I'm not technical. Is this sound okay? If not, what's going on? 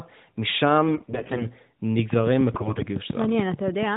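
No. From 0.88 to 1.49 s and again from 2.52 to 2.83 s, the speech turns hoarse, scratchy and gargly, though it stays at about the same pitch and loudness. These are AMR bit errors. Over a weak mobile link, a fair share of the less important data in each chunk of the phone call arrived garbled. The phone still accepted it, so it rebuilt the voice from partly wrong instructions.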